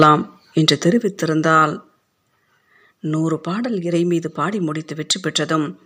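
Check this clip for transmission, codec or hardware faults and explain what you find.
Two hardware-side faults are present: microphone overload at the very start, followed by three stepwise reductions of microphone volume.

Microphone overload occurs from 0.00 to 0.05 s. The peaks run about 6 dB past the converter's full-scale limit, and a few percent of samples in that stretch are flattened at the ceiling. The likely cause is input gain set too high, so the waveform tops are sheared off rather than reproduced. The result is a brief harsh, crackling edge on the opening speech.

Microphone volume stepped down occurs at 0.03, 1.02 and 2.04 s, with level drops of about 4, 5 and 2 dB respectively. Each change happens in a single step, which is likely the call software's automatic gain control reacting to the overloaded input by lowering the device's input volume. The first step lands inside the clipped burst. 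Speech and background fall together at each point, producing abrupt level changes rather than a smooth fade.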